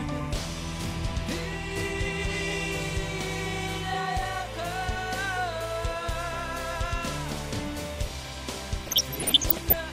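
From the first second to the end, a timecode bleed runs behind the sound: linear timecode from an adjacent track or cable has leaked into the audio path. Its square wave flips between two pitches near 1 kHz and 2 kHz, and the pattern repeats 25 times a second, matching 25-frame code. It sits about 20 dB below the programme, so it comes through as a constant chirping warble rather than masking the material.

From 8.86 to 9.73 s, DAB burbling sets in. Reception was weak enough that bit errors slipped past the error correction into the MP2 data. The error rate points to something under one percent, and the disruption spans dozens of frames. Corrupted samples put short blips of noise into individual sub-bands, and corrupted scale factors, where they get through, make sub-bands lurch in level for up to a frame, producing burbling layered over the programme until the burst ends.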